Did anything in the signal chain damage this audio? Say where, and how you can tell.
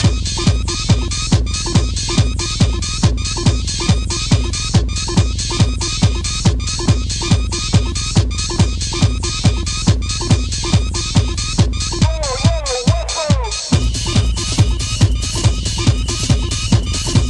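No, nothing in the signal chain can be heard damaging this audio. No stage from the wiring and converter through to storage and playback leaves any audible mark on the sound.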